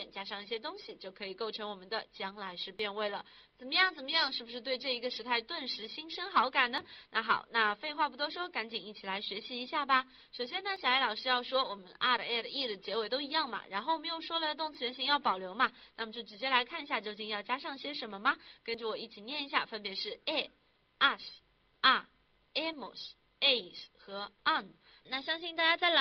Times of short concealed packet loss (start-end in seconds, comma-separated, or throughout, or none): none